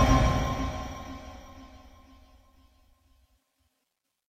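No technical faults can be heard anywhere in this recording.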